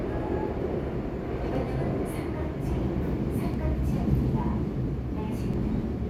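A short recording of sounds with three tiny skips at 1.55, 3.54 and 5.54 s, spaced about two seconds apart. That's overlap between stream segments: 2-second segments whose timestamps overlap, so between about 4 and 17 milliseconds of real audio get trimmed and the waveform jumps.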